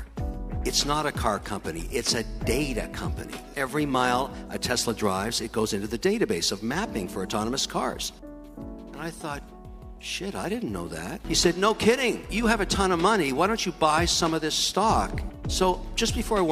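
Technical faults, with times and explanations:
No dropouts, clicks, distortion, level jumps or timing errors can be heard anywhere in the recording.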